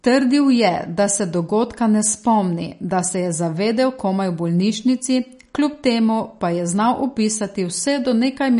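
Throughout this speech recording there is plainly audible MP3 compression damage: the top end stops dead at about 10.6 kHz, and the sibilants and breathy edges take on a watery, swirling quality with metallic chirps. The encoder was likely starved of bits, at a rate around 40 kbps, so it cut the treble and let weak frequency lines blink on and off. A spectrogram would show a flat ceiling near 10.6 kHz and speckled, patchy energy below it.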